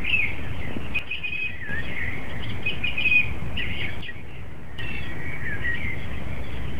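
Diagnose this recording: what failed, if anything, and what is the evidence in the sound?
From 0.99 to 1.69 s and again from 4.01 to 4.79 s, the level drops abruptly by about 6 dB and then returns. This is one channel dropping out, likely at an intermittent analogue connection. With one side gone, the mono sum keeps only half its shared content.

At 4.31 s a few milliseconds of audio are missing, heard as a tiny skip where the surrounding material joins with no gap of silence. This is audio missing between chunks, likely lost at a driver or buffer handover that fits 2.5 s chunks.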